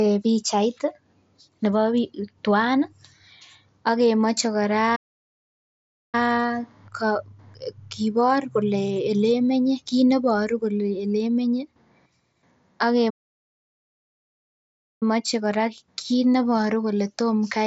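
At 4.95 s the speech stops mid-flow and the output goes silent. It returns at 6.15 s, after about 1.17 s. This is a playback stall. The likely cause is the player running out of data or its thread being blocked. A second, longer stall follows at 13.10 s. That silence lasts about 1.91 s, ending at 15.03 s. Both gaps cut sharply through the speech, over a band that tops out near 8 kHz from the mSBC headset link.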